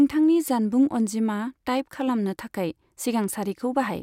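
No technical faults can be heard anywhere in the speech recording. There is nothing to mark at any point in the timeline.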